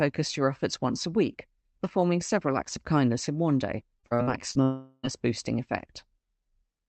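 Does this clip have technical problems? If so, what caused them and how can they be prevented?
Yes. Repeated packet loss (robotic sound) runs from 3.99 to 4.58 s, right after "kindness in one day". Five short holes open in the stream, the longest about 42 ms, and each is patched by stretching the last bit of sound before the next arrives. Roughly a third of that stretch, about 200 ms in total, is made-up filler, which gives the choppy texture with pieces missing. Prevent it with a steadier connection, such as wired rather than Wi-Fi, or by enabling the codec's in-band error correction.

A long network dropout follows from 4.63 to 5.06 s. For about 400 ms the original audio is gone, and what fills the gap is a continuation of the preceding sound that turns into a fading buzz or hiss rather than silence. When the real audio resumes at 5.06 s, the lost portion is never played. The likely cause is a break in delivery long enough that the receiver had nothing to play and had to invent sound until packets flowed again. 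Prevent it by fixing the underlying network interruption, for example congestion or a brief link loss, or by giving the call a more reliable path. Throughout the clip the Opus call path cuts the audio off at 8 kHz, and its coding texture suggests a rate around 32 kbps.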